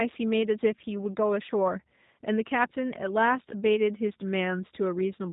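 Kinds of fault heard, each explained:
G.729 codec: The speech runs through a low-rate codec that models the vocal tract and pitch and codes a sparse pulse excitation, which fits an 8 kbit/s G.729 stream. Nothing passes above 3.8 kHz, and the roughened, synthetic texture is plainly audible throughout.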